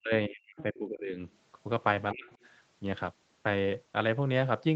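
From 0.0 to 0.12 s and again from 0.28 to 1.2 s, the speech drops in pieces by as much as about 40 dB, likely speech suppressed in double talk as the echo canceller turns down both sides at once. Inside that stretch, from 0.57 to 0.78 s, the other side's voice leaking through is audible about 20 dB below the speech. Suppression returns from 2.12 to 2.33 s with dips of about 30 dB, followed by faint leakage from 2.32 to 2.46 s at about 35 dB down.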